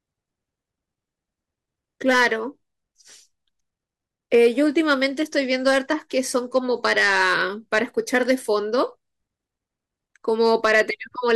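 Hard clipping runs through the whole recording: the speech was driven about 6 dB past what a stage in the chain could pass, so the loudest peaks are sliced flat. Only a small share of samples, around half a percent, hits that ceiling, so the damage comes as brief crackle on emphatic peaks rather than constant fuzz. A waveform shows squared-off, flattened tops, and a spectrogram shows thin vertical streaks of harmonics reaching high up at each clipped moment.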